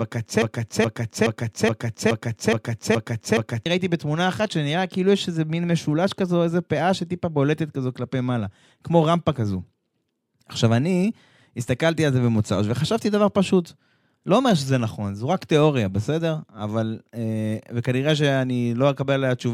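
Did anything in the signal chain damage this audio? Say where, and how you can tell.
Yes. A broken-record loop from 0.42 to 3.66 s repeats a 0.42 s fragment eight times identically, with no decay like echo, likely a stalled playback buffer.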